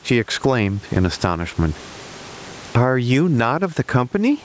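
Throughout the speech, the level breathes. The room noise sits about 38 dB below the speech, and the gain swings by roughly 20 dB. This is gain pumping, likely from input gain set far too high with a fast limiter clamping each loud syllable. Unlike a noise gate, the background never drops to silence, and loud and soft syllables end up squashed together.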